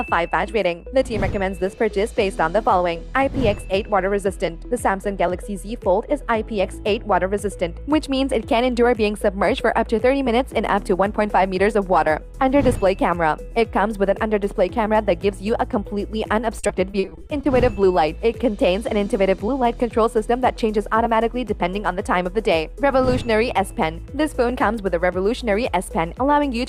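From 16.59 to 17.45 s, packets went missing or arrived too late, again and again, producing repeated packet loss with its robotic sound. Roughly ten short holes fall in under a second, the longest about 40 ms, and each is bridged by extending the last received sound, so around 240 ms is filler, some 28% of that stretch. The audio turns choppy and mechanical, with pieces missing.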